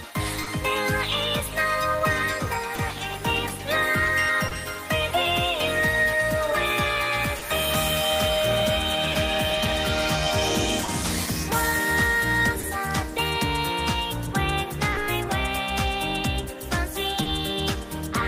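Running under the whole clip is clock drift between sender and receiver. The far end's clock is slow by roughly one and a half percent, so the receiver's jitter buffer keeps draining. You hear it as small timing hiccups that never quite settle, scattered unevenly from start to finish rather than landing on a steady beat.

The first symptom arrives early: a short stall from a late packet at 0.43 to 0.48 s. The packet wasn't in when it was needed, so the receiver held the last bit of sound for about 30 ms and then picked up exactly where it left off. Nothing goes missing, but that moment hangs a touch too long, with a faint buzzy dip. The same stall comes back at 2.75 to 2.80 s, 4.48 to 4.53 s, 14.92 to 14.97 s and 17.22 to 17.27 s, each one a 30 ms hold.

From 1.97 to 16.55 s you've also got repeated timing corrections, the receiver's way of coping with that slow clock. It keeps repeating tiny slivers of sound to stay in step. 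Altogether it pads out something like a twentieth of a second, always in the same direction but unevenly spaced. Each edit is small, so it comes across as a slightly wobbly tempo more than anything you'd point at.

Between 7.39 and 12.65 s there are scattered short gaps, about four of them, where packets went missing or arrived late. The receiver papered over each one by carrying the last sound forward, the longest around 30 ms, covering roughly 2 percent of that stretch. They show up as brief ticks and little smears.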